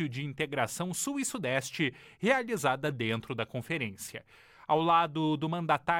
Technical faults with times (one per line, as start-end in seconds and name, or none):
none